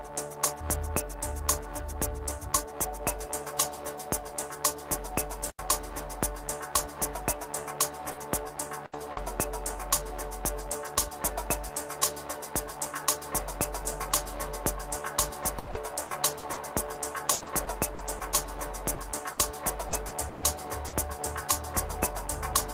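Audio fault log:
5.46–5.63 s, intermittent contact: a loose connection opens for about 87 ms. The signal drops out abruptly, with crackle at the break and remake of the contact, and faint hiss fills the open interval.
7.97–9.27 s, repeated packet loss (robotic sound): three gaps totalling 160 ms, the longest 80 ms, covering about 12% of the span. The decoder extends the last sound into each hole, so the passage turns choppy, with pieces missing.
10.61–10.63 s and 10.87–10.89 s, lost packet rebuilt from error correction: two separate 20 ms packets went missing. Each was replaced with the low-bitrate copy carried in the next packet, so nothing drops out, but each brief moment sounds rougher and noisier.
15.59–20.95 s, repeated packet loss (robotic sound): sixteen gaps totalling 800 ms, the longest 140 ms, covering about 15% of the span. Repeated concealment keeps stretching earlier sound over the holes, producing a sustained choppy, broken texture with pieces missing.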